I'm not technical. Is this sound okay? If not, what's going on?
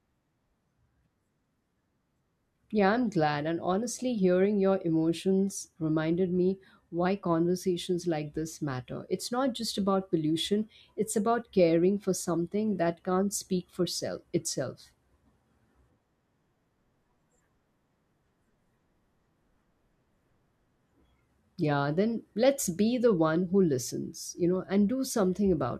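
Yes, nothing's wrong with this recording, so there's nothing here for you to worry about.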